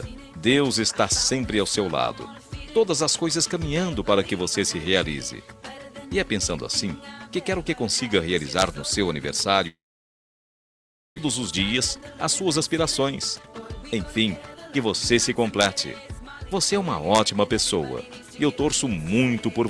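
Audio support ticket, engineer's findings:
Audio drops at 9.67 s: brief fading buzz, then near-silence until 11.20 s, with about a second of material simply gone. Likely a long network dropout, with the receiver concealing briefly before giving up and resuming past the lost chunk.

From 11.51 to 15.37 s everything plays about 13% fast, same pitch, noticeably hurried. Classic jitter buffer speed-up: after the gap it's carrying extra backlog and trims tiny pitch-period slices repeatedly to shed roughly half a second of delay.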